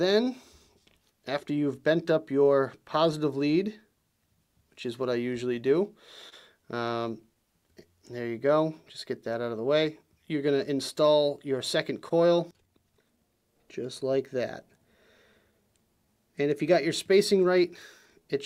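The sender's audio clock runs about 1.5 percent slower than the receiver's, a case of clock drift between sender and receiver that persists through the whole recording. Because material arrives slightly slower than it is played out, the receiver's jitter buffer keeps draining, and the playback side has to compensate continuously. What reaches the ear is a faint, uneven unsteadiness in pacing rather than any single obvious break.

That compensation takes the form of repeated timing corrections from about 0.16 s to 18.21 s. The receiver keeps inserting short repeated fragments to stretch the audio, all in the same direction, and over the stretch this adds roughly a third of a second. The effective playback speed works out to 99 percent. Each edit is tiny and irregularly spaced, so the sound drags very slightly and shows occasional small hiccups rather than a clean, steady tempo.

At 6.29 to 6.34 s the buffer actually ran dry, producing a short stall from a late packet. 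With nothing to play, the receiver held the last sound for 27 ms until the packet turned up, then resumed from the same point, so nothing is lost and the delay grows by those 27 ms. The result is a brief held or slightly buzzy smear at that moment.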